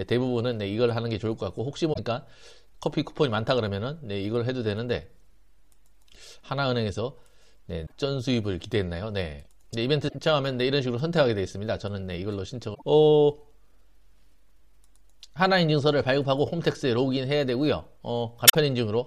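Damaged data in a compressed stream makes the decoder misread frames and lose sync, producing brief chirps or squawks of about 0.1 s at 1.9, 7.83, 10.05, 12.71 and 18.47 s.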